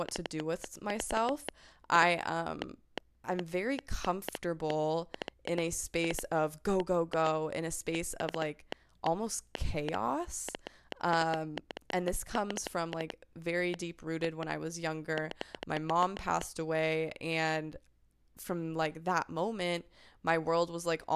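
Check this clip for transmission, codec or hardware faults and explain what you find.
One fault is present, a train of clicks running from 0.09 to 16.42 s. About 4.5 same-shaped pulses per second at uneven spacing, roughly seventy in all, tick and pop well above the speech and through the pauses. Likely external interference or a struggling interface; unlike dropouts or crackle, the sound itself never breaks or turns ragged.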